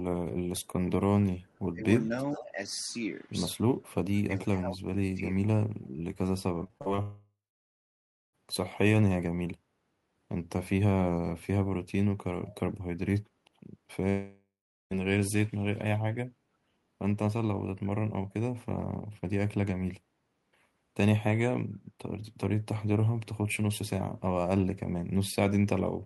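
At 0.57 s there is a tiny buzzing click as one very short slice of sound plays five times in a row with hard joins. This is a repeated buffer: new audio did not arrive in time, so the device replayed its last block four extra times. Each repeat lasts about 1.45 ms, which fits a 64-sample buffer, and that is why it comes across as a click rather than a stutter.

From 1.42 to 1.59 s a faint trailing copy of the speech can be heard, about 40 dB below it and delayed by 457 ms. This is an echo leak. The likely cause is a far end playing the call on a loudspeaker whose echo canceller let some of the pickup through and sent it back.

Between 1.70 and 1.86 s the talker's voice dips sharply, by about 25 dB. It dips again from 2.08 to 2.18 s, this time only slightly, by about 5 dB. These dips fit speech suppressed in double talk: with both sides speaking, the canceller could not separate the talker from the echo and turned everything down.

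The echo returns at 2.34 to 2.44 s, now much more audible at about 15 dB below the speech. Overlapping it, from 2.36 to 2.58 s, the voice is pushed down by about 15 dB. A longer suppression runs from 4.16 to 5.23 s, with the voice dropping by up to about 25 dB across roughly 0.7 s of it. Another quiet echo scrap, about 40 dB down, appears at 5.83 to 5.89 s.

From 6.64 to 7.00 s the sound turns choppy. Five short holes, the longest 39 ms, are patched by stretching the preceding sound, and the patching covers about 30% of that span. This is repeated packet loss, and it produces the robotic sound.

It runs straight into a long network dropout from 7.02 to 8.35 s. A fading buzz gives way to about a second of silence, and the speech resumes with roughly 1.3 s missing. The likely cause is that no packets arrived for that whole stretch.

An echo at about 25 dB down appears at 12.45 to 12.52 s. 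A second dropout from 14.09 to 14.96 s loses about 0.8 s of speech, including about 0.4 s of silence after the concealment fades.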